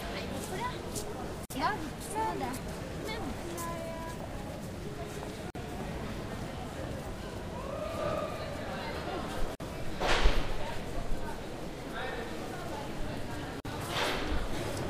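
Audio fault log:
1.45–1.50, 5.50–5.55, 9.55–9.60 and 13.60–13.65 s, gap at a join of encoded pieces: a 49 ms hole of silence recurs every 4.0 s with smeared edges, where separately encoded pieces were joined untrimmed, leaving each run's start-up delay and final-frame padding in place before the sound resumes.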